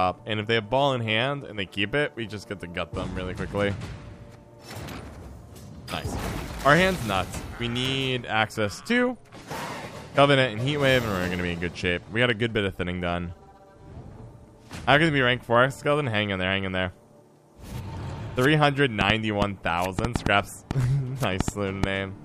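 From 19.01 s to 21.85 s a train of clicks sits over the sound. About ten sharp, similar pops arrive at an uneven pace, roughly 3.5 per second, peaking about 20 dB above the audio. Interference from nearby equipment is the likely cause.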